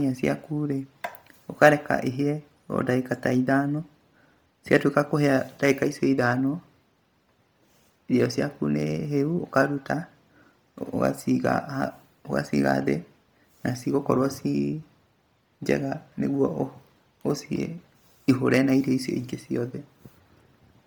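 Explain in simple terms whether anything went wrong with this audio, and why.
The speech sounds breathy and grainy for the whole clip, with a gritty hiss clinging to every syllable instead of clean detail. That's most likely heavy Bluetooth LC3 compression, which chops sound into 10 ms slices and fills discarded upper detail with noise.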